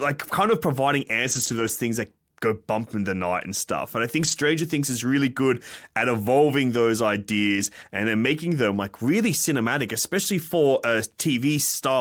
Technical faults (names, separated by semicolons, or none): lost packet rebuilt from error correction